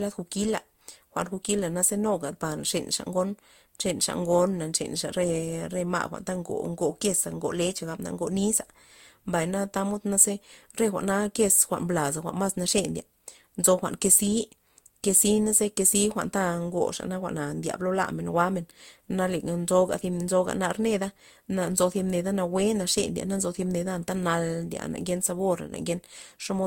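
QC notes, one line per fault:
throughout, transcoding between lossy codecs: the speech carries two distinct sets of coding artefacts layered together, with nothing above 16.6 kHz. This likely comes from a low-rate Opus encode re-encoded to Vorbis, which fits roughly 32 then 65 kbit/s. The second codec spends bits reproducing the first one's damage, and the lower cut-off survives.
25.67 to 25.72 s, one channel drops out: for 50 ms the level abruptly sinks by about 6 dB, then snaps back. One stereo channel was likely lost briefly, so after the mono sum, material shared by both channels halves in amplitude. Anything present only in that channel vanishes.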